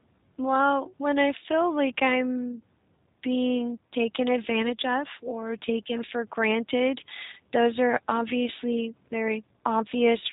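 Speech, run through a G.729 codec from start to finish, and the damage is plainly audible. Everything above about 3.8 kHz is gone, and the rough, slightly synthetic texture fits 8 kbit/s, with each short frame rebuilt from a vocal tract filter, pitch predictor and a few pulses.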